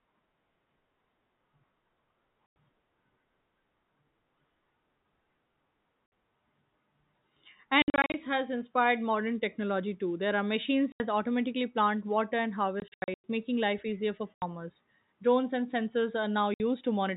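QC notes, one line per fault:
2.46–2.55, 6.06–6.12, 7.82–8.14, 10.92–11.0, 12.8–13.24, 14.34–14.42 and 16.54–16.6 s: packet loss filled with silence. Speech drops out abruptly, with hard edges, losing 60 to 280 ms each time. Near 7.82 s (before "has inspired modern technology") and 12.8 s (after "automatically plant water and") the holes are scattered over roughly a third to half a second. Gap lengths step in multiples of 20 ms, which fits 20 ms packets. Missing audio was replaced by silence rather than concealed. The narrowband telephone sound ends near 4 kHz.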